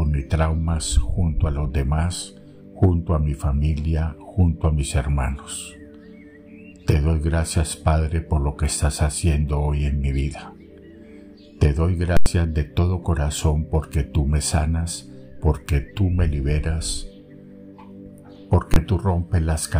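A processing calculation produced invalid numbers at full scale, pinning the output at maximum level for a block. At 12.17 to 12.26 s (about 93 ms, fitting a 4096-sample block), the audio gives a loud pop at each edge with silence between. At 18.74 to 18.76 s, a 1024-sample block collapses into one sharp bang.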